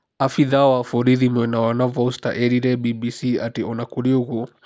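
Nothing stood out on listening to this recording of speech.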